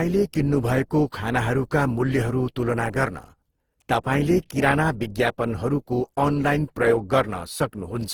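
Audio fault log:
throughout generation loss: likely repeated lossy re-encoding, about ten passes, consistent with Opus near 48 kbit/s, stacks quantisation noise, so the speech sounds swirly, hollow and smeared, with blurred attacks.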